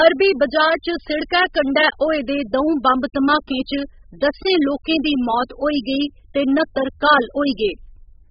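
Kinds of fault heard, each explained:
AAC compression: The speech sounds dull and smeared from start to finish, with nothing above about 5.1 kHz, so sibilants lose their crispness, and the heavy damage leaves a warbling, fizzy texture on sustained sounds. The likely cause is AAC-LC coding at a very low bitrate, consistent with around 8 kbps. The encoder discards the whole upper band and quantises what remains so coarsely that fine spectral detail collapses.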